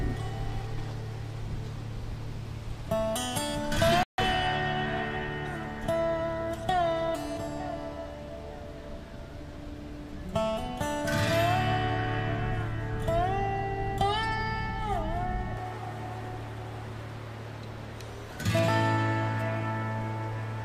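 The audio drops to complete silence from 4.03 to 4.18 s, a gap of about 151 ms, then resumes. This is a Bluetooth stall, likely caused by radio interference delaying packets until the receiving buffer emptied and playback halted until retransmitted data arrived.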